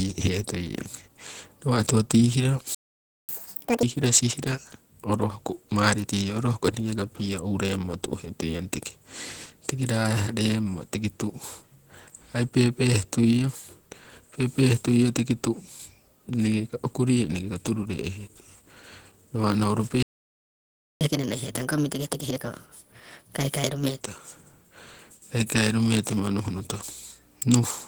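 The speech is carried throughout by Opus voice compression at 16 kbps in hybrid mode: the low band goes through the linear-prediction coder with its excitation quantised coarsely, while a thin transform layer covers the top. The damage is plainly audible, giving the voice a hoarse, slightly robotic grain.

At 2.75 s a playback stall cuts the sound dead for about 0.54 s, most likely because the player's buffer ran dry, until 3.29 s. Catch-up at higher speed follows: from 3.29 to 3.83 s the backlog is resampled at 2× speed, so the speech rushes and jumps up roughly ten semitones into a chipmunk register before snapping back.

A second, longer playback stall silences the output from 20.03 to 21.01 s, nearly a full second. Its catch-up is gentler but longer: from 21.01 to 24.01 s playback runs at 1.25× speed, pushing the pitch up by about four semitones before it settles.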